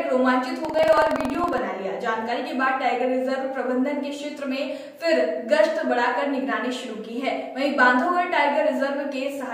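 From 0.60 to 1.62 s a rough, robotic rattle sits on the sound at about 21.5 Hz: buffer tearing. Writer and hardware reader have slipped within a ring buffer, which fits a 2048-sample buffer, so a small slice of each period replays audio about a fifth of a second old, with hard joins.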